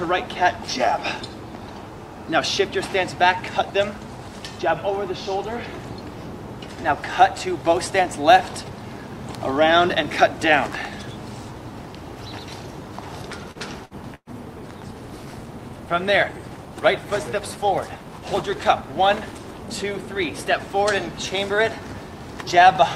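At 13.51 s there is a short stall from a late packet. A packet arrived late and the jitter buffer ran dry. The receiver held the last sound for about 39 ms, until 13.58 s. Nothing is lost. The sound simply hangs briefly, with a faint buzz or dip, and playback then runs 39 ms later.

From 13.85 to 13.94 s comes a burst of packet loss. About 60 ms of audio never arrives. The receiver stretches the last sound for roughly 54 ms, fading it down. The audio then jumps ahead, so a small piece is skipped.

At 13.94 s a call bitrate drop begins. The bandwidth estimate fell and the encoder got far fewer bits. The sound turns coarse and dull, losing its top end. This fits a fall from 96 to 28 kbps. It stays at its worst for about 5.8 s and recovers by 21.25 s.

A second burst of packet loss runs from 14.15 to 14.30 s. This one is longer, with about 120 ms missing. Around 119 ms is filled with a fading continuation of the last sound, including about 40 ms of near silence. 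Then the audio resumes further on.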